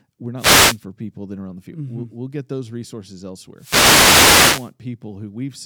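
At 0.36 s a wireless microphone noise hit breaks in for 0.43 s, and a second, longer one runs from 3.56 to 4.73 s. In both, the FM radio link fades and receiver noise swells over the speech as a swish of static. Unlike a digital dropout, which leaves clean silence or a glitch, the speech here is overlaid with rising and falling hiss rather than cut out.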